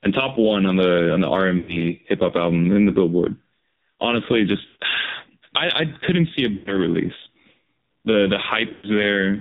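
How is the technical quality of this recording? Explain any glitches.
The technical quality is poor: the speech is heavily band-limited and synthetic throughout, with four short dropouts where the sound smears and fades.

The whole clip sounds buzzy and muffled, with nothing above 4 kHz. This is the AMR narrowband mobile codec. Its vocal-tract model runs on very few bits here, which fits a low AMR-NB mode around 5.9 kbps and causes the heavy, artificial coloration.

Lost AMR speech frames occur at 1.58 to 1.87 s (after "on the on the", before "hip hop album in"), 4.66 to 4.83 s, 6.54 to 6.79 s (after "couldn't see a") and 8.72 to 8.89 s. Each time, the sound stretches into a held, warbling tone and sinks toward silence before recovering roughly. The decoder is repeating its last good settings at falling gain across a gap of about 0.1 to 0.14 s, which points to a run of five to seven damaged frames.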